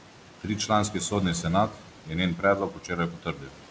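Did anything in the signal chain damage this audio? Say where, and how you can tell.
Yes, in the call processing stage. Noise suppressor artifacts run throughout: the room noise ducks about 12 dB between phrases, then swells back under speech.

Speech cut by the noise suppressor at 1.7–2.12 s and 2.71–3.59 s: quieter parts, mistaken for noise, drop about 12 dB and sound swallowed.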